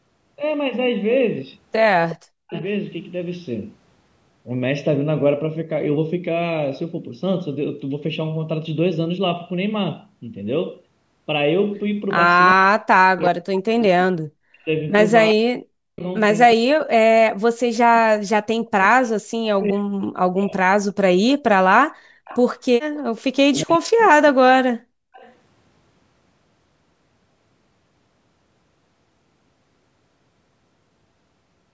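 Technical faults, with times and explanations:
Throughout, channel delay (comb filtering): one channel trails the other by about a third of a millisecond, and summing them to mono cancels shared content at evenly spaced frequencies, starting around 1.5 kHz. That fixed notch pattern gives the speech a hollow, phasey colour the whole way through.
2.11–2.62 s, 22.25–23.21 s and 25.13–25.34 s, echo leak: a faint copy of the speech returns 369 ms late, about 20 dB below the main level in the first two spots and about 30 dB down in the last. It's likely the loudspeaker side's echo canceller letting some loudspeaker pickup back through its microphone.
2.17–2.54 s, 12.54–20.6 s and 23.4–24.68 s, speech suppressed in double talk: the speech dips hard, by up to roughly 40 dB, in short bites and through most of the long middle stretch. That's likely the echo canceller failing to separate the talker from loudspeaker echo while both sides talk, so it turns both down.
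21.89–22.2 s and 24.96–25.13 s, background gated by the echo canceller: the room sound drops out briefly, by about 34 and 35 dB, then comes back. The canceller is clamping the microphone while the loudspeaker plays, and the gate opens again once it lets go.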